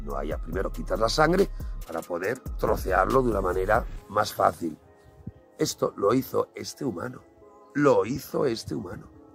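No technical faults can be heard anywhere in the audio.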